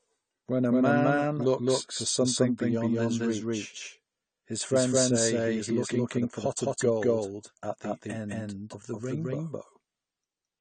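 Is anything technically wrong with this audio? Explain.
Yes, there are two faults, both present for the whole speech clip.

A doubled audio track runs throughout: a second full-band copy trails about a fifth of a second behind at roughly equal level, likely from a second, slower capture path. It sounds like a dry slapback echo with no room tail. A waveform shows every syllable onset repeated; a spectrogram shows each pattern shifted sideways.

AAC compression is plainly audible throughout. Nothing sits above 9 kHz, and the sound is dull and smeared, with a warbling, fizzy texture on sibilants. This likely comes from AAC-LC coding at a low bitrate near 32 kbps. A spectrogram shows a hard ceiling and patchy gaps below it.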